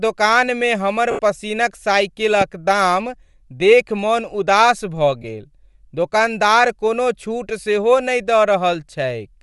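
A speech clip with a breathy, grainy edge throughout and noise-filled treble, likely Bluetooth LC3 compression at a rate that fits 48 kbps. It is steady, unlike bursty packet faults. Lost LE Audio frames appear at 1.11–1.19 s (80 ms) just after "दोकानमे हमर", and at 5.22–5.24 s (20 ms) between "देखि मन उदास भऽ" and "गेल दोकानदार कोनो छूट". Each becomes a noisy smear rather than a clean silent dropout.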